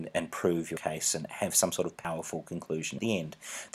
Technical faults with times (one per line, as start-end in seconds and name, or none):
0.77 dropped buffer (overrun)
2.05 dropped buffer (overrun)
2.99 dropped buffer (overrun)